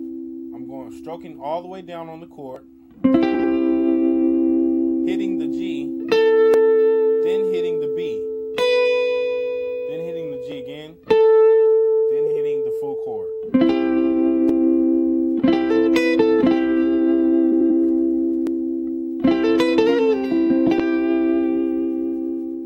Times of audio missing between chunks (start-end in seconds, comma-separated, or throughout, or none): 2.56, 6.54, 10.52, 14.49, 18.47